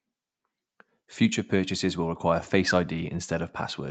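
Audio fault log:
No faults are heard in this speech clip. Nothing reaches above 8 kHz, which fits the normal band limit of a call microphone chain and an Opus call codec working as intended.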